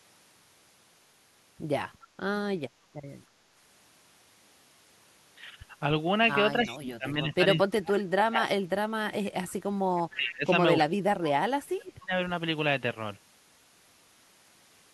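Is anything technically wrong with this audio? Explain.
Yes. The speech has two kinds of fault.

Echo leak appears at 6.59 to 6.74 s, then briefly at 9.49 to 9.53 s and 9.96 to 10.03 s. A faint delayed copy of the speech trails about 0.3 s behind. It sits roughly 20 dB below the voice at first, then weaker, near 35 and 30 dB down. This is likely a loudspeaker echo the far end's canceller failed to remove.

Speech suppressed in double talk occurs from 6.62 to 8.68 s, 10.15 to 10.52 s and 10.81 to 12.14 s. The speech dips and drops out in pieces, at worst by about 30 dB. The canceller likely could not separate its own talker from the loudspeaker echo and turned both down.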